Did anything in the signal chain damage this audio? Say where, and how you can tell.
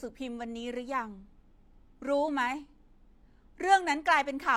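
No, no stage in the signal chain, from capture to playback, has left an audible mark on this speech recording. Close listening turns up no evidence pointing to damage anywhere along the way.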